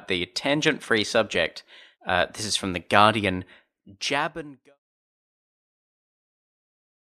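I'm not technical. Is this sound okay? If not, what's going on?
Yes, nothing stood out on listening, and the speech simply fades out smoothly from around 3.5 seconds to 4.79 seconds, as an editor would normally finish a recording.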